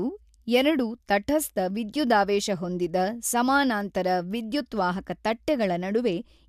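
No technical faults turn up anywhere in this recording of speech, so there's nothing to point to along its timeline.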